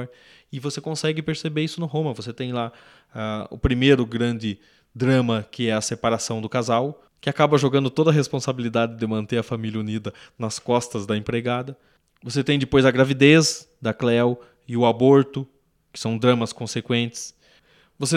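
No technical faults occur at any point, so there is nothing to describe in time order.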